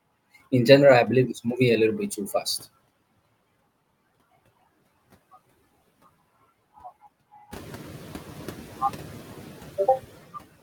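Noise suppressor artifacts run through the whole of this speech clip: the suppressor estimates which frequency bands hold steady noise and pulls them down frame by frame, by about 15 dB here, so the background sinks in the pauses and swells back up beneath each phrase. From around seven and a half seconds the room noise itself climbs by about 16 dB, sitting about 18 dB under the speech, which makes that pumping between gaps and words easier to hear.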